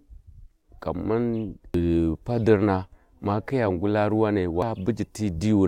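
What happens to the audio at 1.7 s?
At 1.74 s there is a brief burst of damaged data in the compressed stream, heard as a short glitch in the speech, just before "padirna ma kiya ngula". The decoder hits corrupted bytes, cannot read the frame correctly, and drops out of sync until it finds the next valid frame header. That misread produces the artefact.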